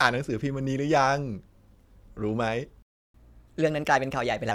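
At 2.82 s the speech just stops dead, mid-flow, and there's silence until 3.14 s, roughly a third of a second (about 318 ms). That's a playback stall: the output had nothing to play for that stretch, most likely because the player ran dry of buffered data or its audio thread got held up. Then sound returns.

Then, from 3.14 s to 4.51 s, you get the catch-up at higher speed. The player is working through the backlog that built up during the gap by resampling it faster, at 1.15 times normal speed. Because it's resampling rather than time-stretching, pitch rises along with tempo, by about two semitones, so the speech sounds quicker and a bit chipmunky for those 1.4 seconds. At 4.51 s it settles back to normal speed and pitch.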